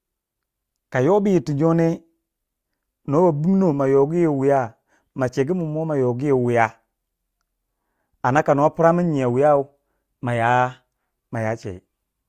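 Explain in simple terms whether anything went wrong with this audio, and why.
Nothing went wrong with this speech recording that a careful listener could pick out. At no point does the sound do anything that points to a technical problem.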